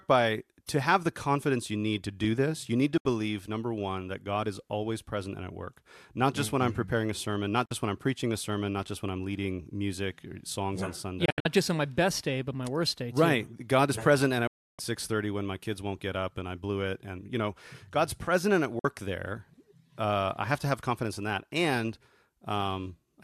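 Digital broadcast dropouts mute the speech at 2.98, 7.66, 11.26, 14.47 and 18.79 s. Each is a receiver losing frames. Gaps last 48 to 312 ms, scattered holes at 11.26 s.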